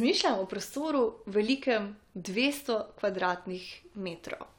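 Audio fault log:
No faults are present in this speech recording. Nothing heard here calls for an entry in the log.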